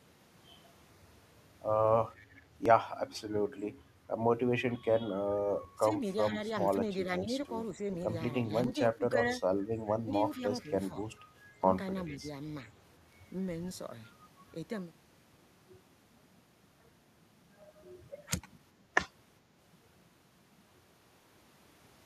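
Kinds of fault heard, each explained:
Echo leak: A faint, delayed copy of the speech trails the talker by 430 ms, about 30 dB down and rising to about 25 dB down near 12.1 s, heard at 2.15 to 2.42 s, 6.67 s, 10.35 to 10.69 s and 12.06 to 12.18 s. The likely cause is a far-end echo canceller letting part of its loudspeaker pickup through. Unlike reverberation, it is a distinct repeat at a fixed lag.
Audio missing between chunks: Tiny skips of a few milliseconds at 2.66, 5.65, 8.64, 11.63 and 17.62 s, where the sound jumps forward with no silence and can carry a slight click. Most sit 3 s apart, pointing to a recorder or processor likely dropping samples at each chunk boundary. They differ from the double-talk dips, which are softer level drops lasting hundreds of milliseconds rather than instant cuts.
Speech suppressed in double talk: The talker's level sags, by a few dB at first and by about 15 dB at the deepest, across 5.77 to 7.81 s, 8.51 to 9.41 s, 10.03 to 10.97 s and 12.11 to 12.24 s. 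These stretches overlap the echo at 6.67 s, 10.35 s and 12.06 s, so the likely cause is an echo canceller ducking everything while both sides sound at once. Unlike chunk gaps, nothing is skipped; the voice is turned down.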